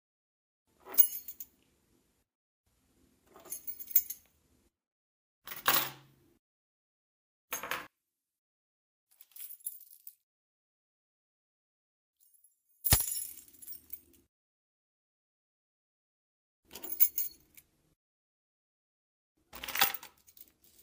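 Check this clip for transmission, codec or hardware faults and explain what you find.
One fault stands out. From 7.87 to 12.90 s the sound drops by about 8 dB, likely from one channel inverted. Shared content cancels in mono, leaving only the channel difference.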